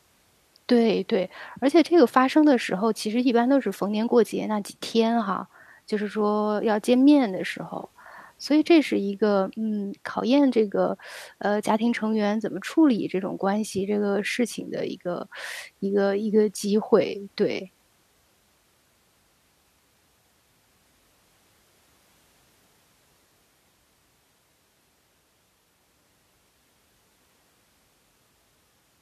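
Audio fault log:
No faults were heard in this speech clip.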